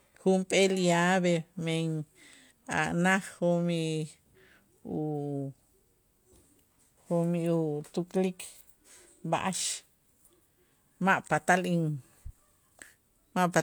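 No technical faults are audible anywhere in the speech recording.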